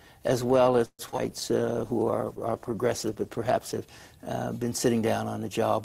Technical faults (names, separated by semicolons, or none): call audio freeze; short concealed packet loss; skip ahead; call bitrate drop; jitter buffer slow-down